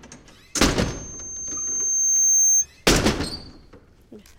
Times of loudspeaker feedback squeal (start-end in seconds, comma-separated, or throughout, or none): 0.82-2.66